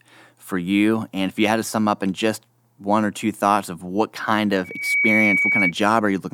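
From 4.64 to 5.73 s, after "thoughts of what kind", a 2.3 kHz loudspeaker feedback squeal swells within about 0.3 s, unlike an interfering whistle that holds steady.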